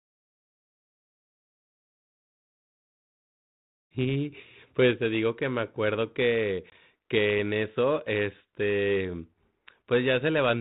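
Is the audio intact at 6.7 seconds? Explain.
No. Packet loss on an ADPCM call cuts a hard-edged hole of about one packet, 20 ms, from 6.70 to 6.73 s. Because the 32 kbit/s G.726 decoder's prediction and step size drift from the sender's, speech resumes with brief distortion, settling within tens of milliseconds.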